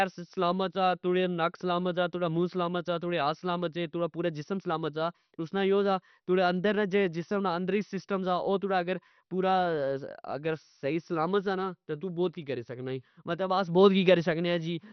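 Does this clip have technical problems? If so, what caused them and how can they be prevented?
Yes. The speech was likely squeezed through MP2 compression at too low a bitrate, and the damage runs through the whole clip. With too few bits to share among its 32 sub-bands, the encoder shut off the upper bands entirely, so nothing survives above about 6.2 kHz, which fits a rate near 48 kbps. The remaining bands are coarsely quantised and drop in and out, leaving the speech dull and muffled with a heavy gurgling, granular distortion. Prevent it by encoding at a much higher bitrate or with a more efficient modern codec.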